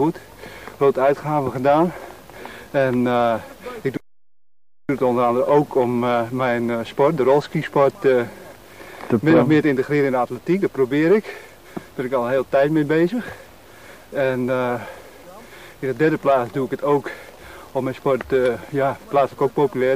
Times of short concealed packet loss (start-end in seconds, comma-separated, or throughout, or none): none